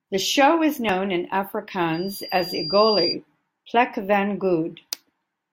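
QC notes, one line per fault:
1.93–3.16 s, loudspeaker feedback squeal: a single 4.8 kHz tone swells over about a second until it matches the speech level, as the mic re-amplifies its own loudspeaker output. The gradual self-driven rise separates it from a steady interference whistle.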